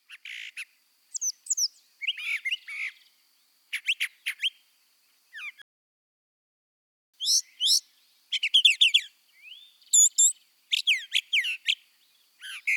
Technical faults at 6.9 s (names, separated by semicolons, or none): playback stall